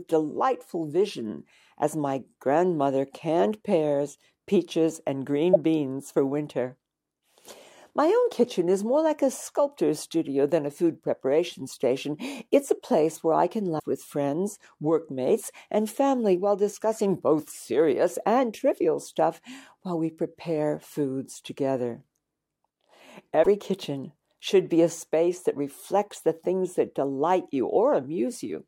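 At 5.53–5.56 s, after "canned pears peaches and", at 13.76–13.84 s, after "place where I can", and at 23.39–23.46 s, just before "kitchen should be a", damaged data in a compressed stream makes the decoder misread frames and lose sync until it finds a valid header. Each is heard as a brief chirp, squawk, click or short hole. On a spectrogram each appears as a narrow vertical disturbance. The waveform shows an abrupt, discontinuous break in the speech envelope.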